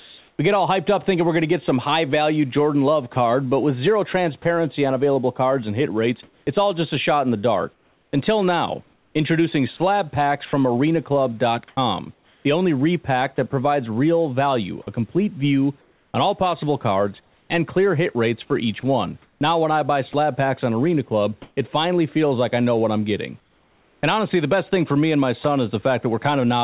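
Sound chopped by the voice detector occurs from 3.13 to 4.45 s, ending just before "on available cards and"; from 6.23 to 13.38 s, between "cards and hit rates" and "that provides real value"; from 14.82 to 17.5 s, up to "clear hit rates for"; and from 18.8 to 21.57 s. The sender's voice detector likely kept toggling transmission off and on, so quiet syllables and word edges were replaced with synthetic fill, about 60 ms in the first stretch, 1.49 s in the second, 0.68 s in the third and 0.38 s in the last. The speech sounds choppy.

Comfort noise in place of the background runs from 23.4 to 24.03 s. In this pause the sender likely stopped transmitting, and the receiver generated a steady, featureless noise in place of the real room sound. That noise sits about 5 dB lower than the genuine background, so the ambience dips and flattens until speech resumes.

Sound dropped by the voice detector occurs at 25.44 s. 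Here the detector likely mistook a quiet sound for background and cut about 10 ms. It shows up as a tiny gap filled with steady noise before the sound returns, heard through a telephone-band path with nothing above 4 kHz.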